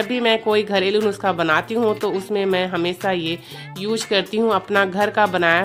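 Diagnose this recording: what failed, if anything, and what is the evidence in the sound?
Nothing in the chain has failed: the signal stays continuous and stable throughout, with no audible event that would point to any stage from capture to playback.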